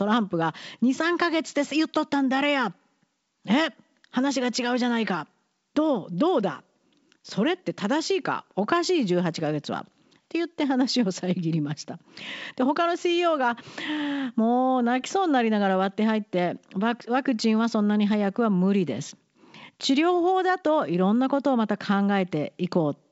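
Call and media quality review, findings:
No faults found in this call.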